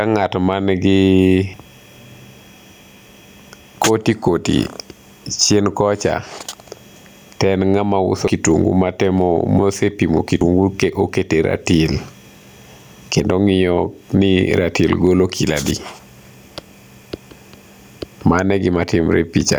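Throughout the speech, the gain swings by about 15 dB, leaving loud and quiet passages squashed together. This is gain pumping, likely from input gain set far too high with a fast limiter clamping down on every peak.

At 1.54 s, just after "man gi", the sound jumps ahead. The same happens at 6.49 s, at 8.28 s between "ng'ama uso" and "kitungu matemo mosepimo", and at 10.41 s between "uso kitungu matemo mosepimo" and "gu oketo e ratil". Each is a dropped buffer (overrun), with roughly 100 ms of audio skipped. The likely cause is the software failing to read its samples before the hardware overwrote them, so each side of the gap is joined directly.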